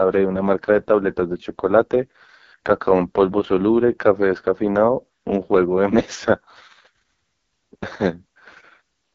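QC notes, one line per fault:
Throughout, AMR wideband (HD Voice) codec: the speech sounds rough and raspy, with nothing above about 7.5 kHz. This fits the codec's lowest-rate mode, near 6.6 kbit/s. At that rate the vocal tract model is coded too coarsely, and the band above 6.4 kHz is only shaped noise.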